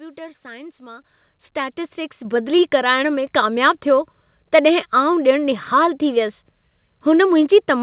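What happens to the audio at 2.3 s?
At 2.25 s, just before "बदिली कराइण में", a microphone volume step-up raises the input gain by about 5 dB. Speech and background jump together, seen as a sudden waveform envelope rise.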